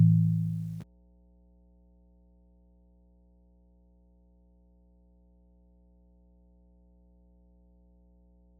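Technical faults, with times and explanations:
Throughout, mains hum: a steady low tone at 60 Hz sits under the entire clip, at roughly 35 dB below the signal, so it is quiet but constant. This is the power-line frequency leaking into the signal path, typically through a ground loop between connected equipment or magnetic coupling from a nearby transformer. Because it does not vary with the programme, it reads as a fixed drone rather than noise.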